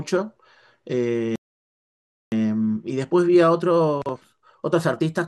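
A speech clip whose playback stalls at 1.36 s: the sound cuts off mid-flow and stays silent for about 0.96 s until 2.32 s, which looks like a flat gap in the waveform and a blank vertical band on a spectrogram, likely from the player running out of buffered data. From 2.32 s to the end, time-compressed catch-up hurries the speech at about 1.15 times normal speed with pitch unchanged. On a spectrogram, syllables sit closer together while harmonic spacing stays the same.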